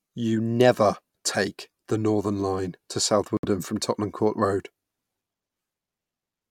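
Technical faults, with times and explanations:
3.37 to 3.45 s, Bluetooth stall: the speech cuts to dead silence for 64 ms, then carries on. That's likely interference holding up packets, so the headphones' buffer ran empty and playback simply waited for the resent data to arrive.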